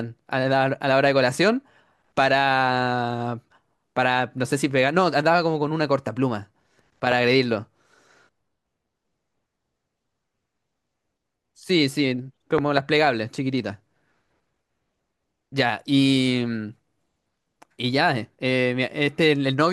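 A speech clip with two loud pops sitting on top of the talking. The first is a single sharp pop from 7.12 to 7.14 s, peaking about 10 dB above the speech. The second, from 12.58 to 12.80 s, is a pair of pops in quick succession, hitting about 15 dB over the speech. The talking carries straight on underneath both. Most likely a sudden voltage spike, such as a plug, switch, static discharge or driver glitch, got into the signal path.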